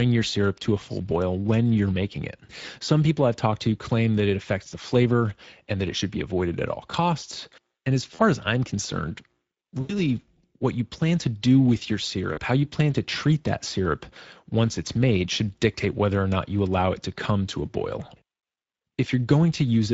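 The whole recording passes through the Speex codec at a middle quality setting, with a sound that fits a rate of roughly 17 kbps. Too few bits describe the excitation, so the speech comes out noisy and hoarse throughout. The damage is plainly audible, and above 4 kHz only a shaped, hiss-like fill replaces real detail.

At 8.15 to 8.32 s, VoIP packet loss concealed by the speech codec stands in for a gap of about 40 ms. The decoder keeps extrapolating its last pitch and filter with falling gain. The speech is stretched and fades, then stays weak and distorted for a moment after real audio resumes. The longer gap of about 80 ms at 9.81 to 10.0 s stretches the concealed sound further before it decays. Another 40 ms gap at 12.33 to 12.40 s brings a brief, similar smear.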